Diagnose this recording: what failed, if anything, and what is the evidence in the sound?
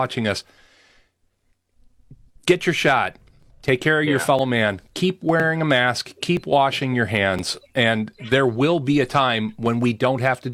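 Playback of a segmented stream failed. This is overlap between stream segments. Tiny skips occur at 1.39–1.43, 2.41–2.45, 3.43–3.46, 4.39–4.42, 5.40–5.44, 6.37–6.41 and 7.39–7.43 s, one per 1.0 s segment. At each boundary the player trims roughly 35–45 ms of speech that was not really doubled. The waveform jumps.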